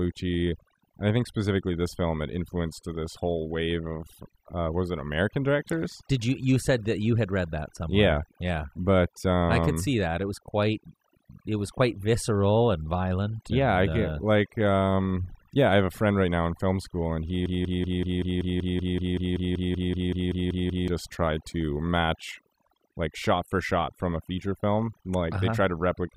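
A noise reduction stage set far too aggressively has processed this whole speech recording. It shuts off narrow frequency bands wherever they sit near its noise estimate, taking quieter voice detail with them. The result is overdone noise removal: a background that drops and breaks up into twinkling specks. From 17.46 to 20.88 s, a stalled player or stream likely kept resending its last buffered fragment. After "film school and he", a 190 ms piece repeats 18 times back to back in a broken-record loop. The audio that belonged there is lost, and the speech resumes at "tried to match like".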